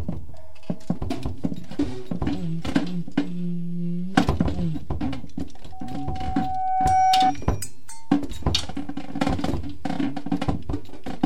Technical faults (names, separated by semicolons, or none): loudspeaker feedback squeal